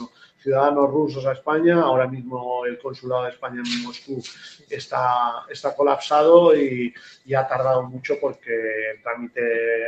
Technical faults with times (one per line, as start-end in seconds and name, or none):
0.00-9.88 noise suppressor applied to music or sounds
0.02-0.47 sound cut by the noise suppressor
2.76-3.07 sound cut by the noise suppressor
3.32-3.51 sound cut by the noise suppressor
3.85-4.12 sound cut by the noise suppressor
4.57-4.72 sound cut by the noise suppressor
6.90-7.31 sound cut by the noise suppressor
7.87-8.02 sound cut by the noise suppressor
8.33-8.49 sound cut by the noise suppressor